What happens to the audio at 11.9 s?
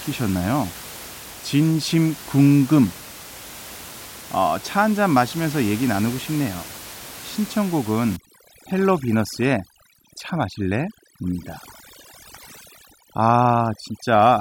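Overdone noise removal, running from 8.16 s to the end of the clip: a noise reducer set far too strong shuts down individual frequency bands near its noise estimate, softer speech included. The room noise, about 17 dB below the speech, drops and breaks up into twinkling specks.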